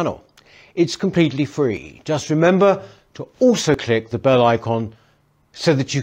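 The speech skips abruptly at 1.77 s and again at 3.74 s, between "remember to also" and "click the bell icon", each losing around 30 ms with no gap. This is audio missing between chunks, likely from 2-second chunks dropping a piece at each handover.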